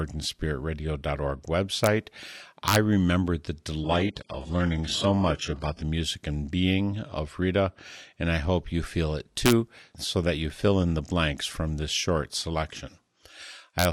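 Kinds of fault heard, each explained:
Integer overflow: loud speech peaks that push past the largest integer wrap to the opposite sign instead of being limited. This gives violent cracks at 1.84, 2.68–2.76, 9.46–9.52 and 13.79–13.85 s, with overdrive of about 1 to 3 dB. The waveform flips sharply to the opposite sign and broadband vertical streaks show on the spectrogram.
Adaptive stream at a lower bitrate: from 3.84 to 5.84 s the stream drops to a much lower-bitrate version, likely HE-AAC at around 12 kbit/s instead of 96 kbit/s AAC. The treble turns thin with no gap. On the spectrogram the content above 11.5 kHz is cut off flat for two seconds.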